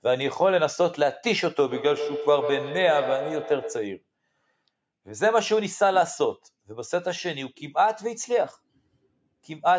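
Speech, with a feedback echo between two devices from 1.67 to 4.03 s: a second device in the room replays the call, and the microphone picks it up again, outside the reach of its own echo canceller. Each syllable returns roughly every 150 ms, growing thinner and more ringing, peaking at about 8 dB below the speech. Room reverberation would smear into a smooth tail instead of these discrete, evenly spaced repeats.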